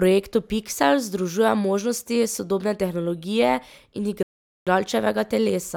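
At 4.23 s, just after "možnosti sodobne tehnologije in", the speech drops to silence until 4.67 s, a rebuffering stall. Playback exhausted its downloaded audio and paused for more data, then resumed at the exact point it stopped, adding 0.44 s without losing any content.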